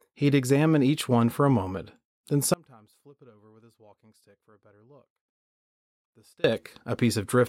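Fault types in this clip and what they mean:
Audio dropout to a faint residue: the speech cuts out abruptly at 2.54 s and returns at 6.44 s, leaving about 3.9 s holding only faint sound roughly 30 dB below normal. The likely cause is signal loss while the path stayed live; unlike a pause or fade, the edges are sudden.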